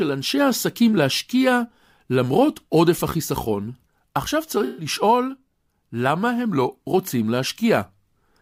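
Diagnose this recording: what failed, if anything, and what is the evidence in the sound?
The failure is in the codec stage: AAC frame loss with concealment. From 4.65 to 4.86 s the speech turns into a smeared, noisy or phasey patch, which fits about six lost frames, roughly 128 ms. The decoder papered over the gap by reusing the last good spectrum with scrambled signs or interpolated energy.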